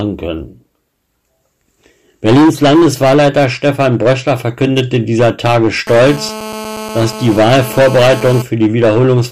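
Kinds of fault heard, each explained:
Hard clipping: a stage in the chain is overdriven by about 14 dB, so speech peaks exceed what it can pass and are sliced flat, roughly a tenth of the samples. Those flattened tops add high harmonics, giving a harsh fuzz on every loud syllable throughout.
GSM phone buzz: a nearby 2G phone on a call transmits bursts about 217 times a second, and the audio circuitry rectifies them. From 5.87 s to 8.42 s a steady, raspy 217 Hz buzz with many harmonics sits about 16 dB below the speech.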